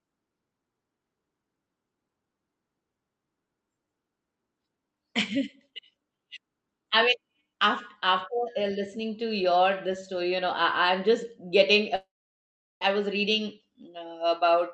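Speech with a long network dropout from 11.95 to 12.83 s: the sound smears into a fading buzz, then sits near silence, which on a spectrogram shows as a blurred band decaying into a dark gap, likely lost packets on the call path.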